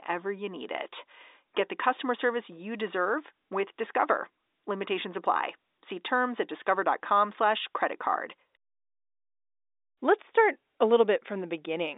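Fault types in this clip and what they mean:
No faults can be heard in this speech recording. The G.711 telephone coding is working as intended, so the sound stays within the telephone band of about 300 Hz to 3.7 kHz.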